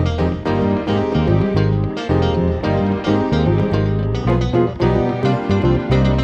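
No technical faults can be heard anywhere in the audio. There is nothing to mark at any point in time.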